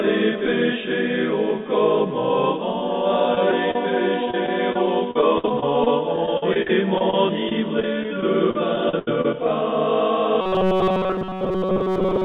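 Brief smears and wobbles at 3.35 to 3.37 s, 3.51 s and 3.71 to 3.76 s are short concealed packet loss: audio arrived too late, and the decoder bridged each gap of 10 to 30 ms by extending the preceding sound. From 4.31 to 9.34 s the sound turns choppy with pieces missing. This is repeated packet loss: 29 gaps, the longest 79 ms, with about 13% of the stretch patched in. From 10.41 s to the end, a rigid buzz near 188 Hz sits on most of the sound. This is robotic sound from repeated short buffers, likely caused by roughly 5 ms chunks being replayed while fresh audio was skipped. Throughout, the G.711 call path leaves nothing above 4 kHz.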